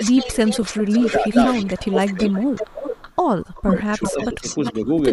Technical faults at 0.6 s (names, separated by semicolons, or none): echo leak; speech suppressed in double talk; lost LE Audio frames